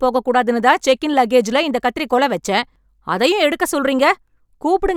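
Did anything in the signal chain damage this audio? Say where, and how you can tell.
No, the signal reaches the listener intact, with nothing audible to show harm at any stage of the chain.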